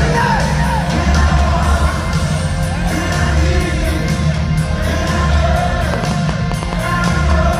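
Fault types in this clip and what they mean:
Train of clicks: a run of similar sharp pulses from 5.94 to 7.32 s, about ten of them at an uneven spacing averaging 5.8 per second and peaking roughly 10 dB above the programme, likely from electrical interference or an unstable interface injecting transients.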